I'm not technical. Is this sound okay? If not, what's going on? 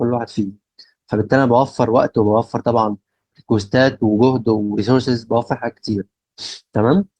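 No. At 4.63 to 4.71 s the speech briefly hangs, with one sound held a touch too long. This is a short stall from a late packet. A chunk of audio arrived late, so the player stretched the last sound for about 58 ms, then continued where it left off.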